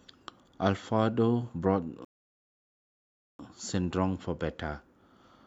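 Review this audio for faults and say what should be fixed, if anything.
A rebuffering stall interrupts the speech at 2.05 s and holds it in silence until 3.39 s, adding about 1.34 s to the running time. The player exhausted its downloaded audio, paused, then picked up from the exact sample where it stopped, so nothing is skipped. On a waveform this is a flat, silent gap; a spectrogram shows a blank vertical band. To prevent it, enlarge the playback buffer or use adaptive bitrate switching so delivery keeps ahead of playback.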